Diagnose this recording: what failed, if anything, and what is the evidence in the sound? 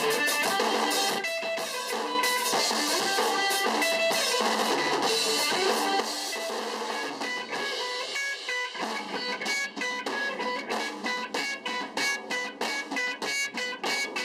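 One channel likely dropped out in the analogue wiring or a loose connector, so the mono sum lost half its contribution. From 1.19 to 2.15 s, and again from 6.01 s to the end, the sound falls abruptly by about 6 dB, with anything unique to the missing side gone.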